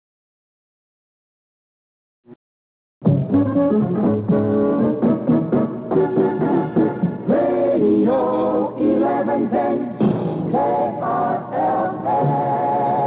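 No technical faults are audible.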